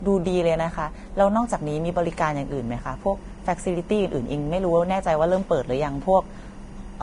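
From the start, the speech is band-limited, with nothing above 10.6 kHz. The upper range is hissy and grainy, consonants sound smeared, and sibilants break into coarse noise. This points to heavy Vorbis compression, likely at a low bitrate around 31 kbps. At that setting the encoder lowers its cut-off and quantises the remaining treble so coarsely that fine detail is replaced by noise of similar energy, which roughens the tonal parts and blurs attacks.

At 1.39 s a steady chirping warble appears behind the speech and continues to the end. This is timecode bleed: linear timecode from an adjacent track or cable leaking into the audio path. The code is a square wave that alternates between tones near 1 kHz and 2 kHz, framed at 24 frames per second, which gives the warble its regular rhythmic texture. It sits roughly 35 dB below the speech.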